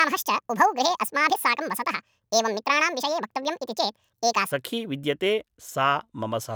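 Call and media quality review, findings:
Section at the wrong speed, 0.0–4.52 s. Speech runs 1.73x fast, pitch raised close to ten semitones, high and hurried, then snaps to normal rate at 4.52 s. Component: likely a playback or resampling stage on the wrong clock. Unlike a pitch-shift fault, tempo and pitch rise together; unlike time-compression, pitch doesn't stay put.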